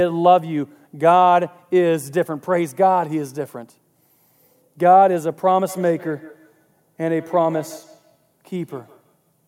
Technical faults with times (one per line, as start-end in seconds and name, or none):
5.69-9.29 feedback echo between two devices